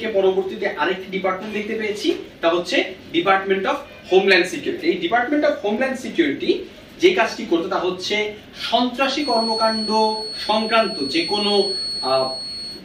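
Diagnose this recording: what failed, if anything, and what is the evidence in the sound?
Feedback whistle from 9.14 s to the end: a 4.4 kHz tone about 10 dB down whose wavering level, unlike steady interference, suggests a likely loudspeaker-to-microphone loop.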